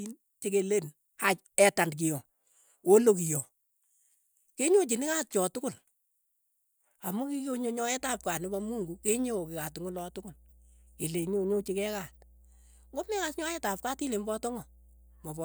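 A speech clip with mains hum. From 7.98 s, just after "amu kikonyo", a steady 60 Hz tone enters and runs to the end. It sits roughly 30 dB below the speech. A ground loop or nearby transformer is coupling the power line into the signal.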